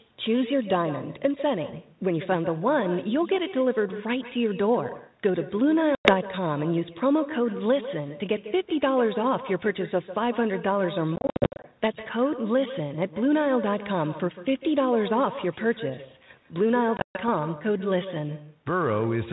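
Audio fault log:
throughout, echo with no canceller: there's a quieter, thinner copy trailing everything by around 150 ms, about 13 dB down. The far end's speaker is feeding their mic and nothing's cancelling it.
5.95–6.14 s, 11.16–11.65 s, 16.97–17.29 s, packet loss on an ADPCM call: hard-edged holes (100 ms, then 330 ms scattered over nearly half a second, then 160 ms) followed by slightly distorted speech while the decoder's predictor catches back up.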